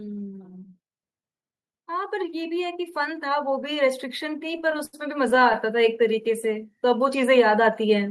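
From 1.86 s to the end, automatic gain is rising: the gain control judged the input too quiet and kept raising it, so the speech and the background noise swell together slowly rather than as a sudden level jump.

Between 4.39 s and 5.56 s, repeated stalls produce a stutter. Packets kept arriving late, emptying the jitter buffer over and over. The receiver stretched the last sound across 14 short holes, the longest 79 ms, about 204 ms in all. Nothing is lost, but the speech drags and catches. The audio sits within a band of about 12 kHz, consistent with Opus at around 40 kbps on the call path.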